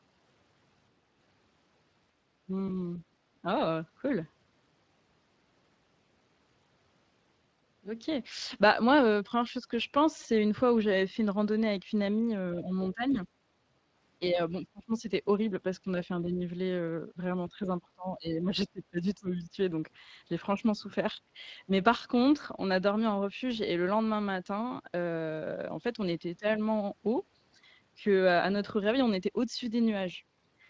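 A Speex codec runs through the whole of this 31-second speech clip, and its damage is plainly audible. The speech is coded at roughly 20 kbps, where the CELP coder has too few bits to rebuild the excitation faithfully. That leaves the voice grainy and hoarse, with nothing above the 8 kHz ceiling set by the call's microphone processing.

On top of that, an echo canceller likely mistook moments of double talk for its own loudspeaker echo. It turned the talker down along with the far side, so the speech suppressed in double talk shows up as sudden dips and partial dropouts. These come at 3.42 to 3.46 s, 12.56 to 12.76 s, 12.92 to 13.26 s, 14.31 to 14.39 s, 14.61 to 15.08 s, 16.21 to 16.41 s, 17.48 to 19.57 s and 26.39 to 26.45 s. Most dips are shallow, around 10 to 15 dB, but they reach about 25 dB near 15 s, and the longest stretch near 18 s loses roughly a second and a half of level.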